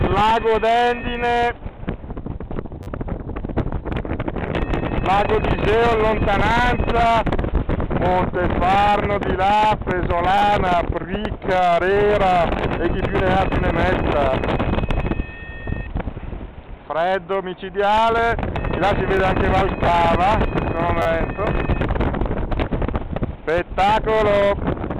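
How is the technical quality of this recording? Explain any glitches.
The main problem is a handful of short stutters from a repeated buffer. They land at 2.83–2.87 s, 10.38–10.41 s, 11.93–11.96 s, 19.17 s and 21.02–21.06 s. Each time, fresh audio wasn't ready, so the device replayed its last 10 ms chunk one to four extra times, with a hard seam at every repeat. With pieces that short you hear a quick buzzy click rather than an obvious stutter, and nothing gets dropped.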